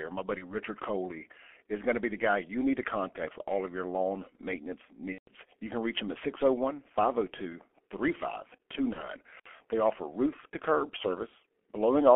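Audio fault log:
throughout: G.723.1 codec. The speech is confined to roughly 250 Hz to 3.4 kHz and sounds muffled and hoarse, with smeared consonants. The heavy damage fits a rate near 6.3 kbit/s, where 30 ms frames and a slowly updated voice model cannot track fast articulation.
0.38–0.56 s, 5.12–5.32 s (just after "of your lawn maintenance"), 8.93–9.09 s: VoIP packet loss concealed by the speech codec. The decoder fills the gaps with a fading continuation built from the last pitch and filter. The middle gap is longest, about 150 ms, the others about 30 ms. Because each frame depends on the previous one, the distortion lingers past each gap.
9.39–9.47 s: intermittent contact. The signal drops out for about 59 ms, with crackle where the connection breaks and remakes and faint hiss while the line is open, as from a momentarily loose plug or cable.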